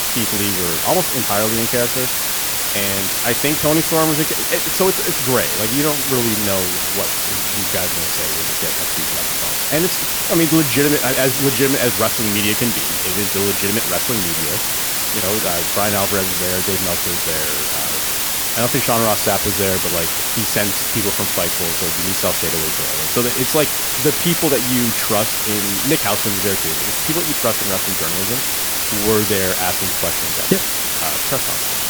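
Throughout the speech runs low bit depth with dither: only 3 bits carry the signal, and dither before rounding turns the error into a steady white hiss roughly as loud as the voice, rather than the gritty, signal-following distortion of undithered quantisation.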